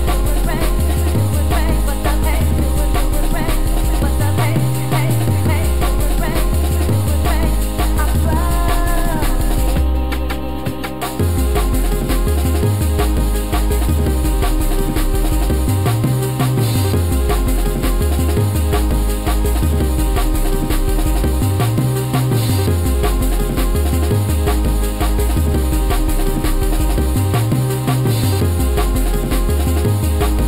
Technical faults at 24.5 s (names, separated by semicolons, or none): channel delay (comb filtering)